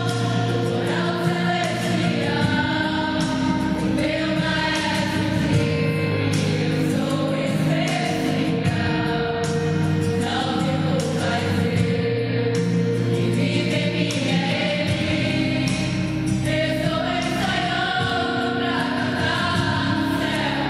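From 0.68 s to 20.15 s there's a regular tick about every 1.02 s, around twenty in all. That's periodic USB or driver dropouts: something stalls the audio path on a fixed schedule, and a tiny sliver of sound gets skipped each time, leaving a small click.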